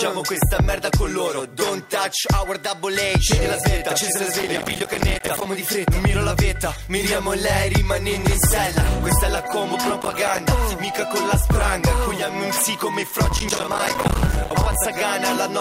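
Processor overload crackle occurs from 4.41 to 5.46 s, 10.01 to 10.39 s and 13.25 to 14.75 s. Dozens of roughly 5 ms buffers miss their deadlines and drop to silence, each gap hard-edged, producing bursts of gritty crackle that stop when the load clears.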